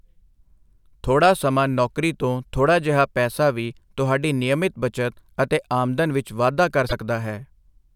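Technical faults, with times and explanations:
6.89 to 6.93 s, broken MP3 bit reservoir: Right after "ਆਮਦਨ ਵਿੱਚ ਵਾਧਾ ਕਰ", the speech skips forward with a 44 ms glitch. The likely cause is missing frames. The next frame then decodes borrowed bits from the wrong data, which fits 26 ms MP3 frames.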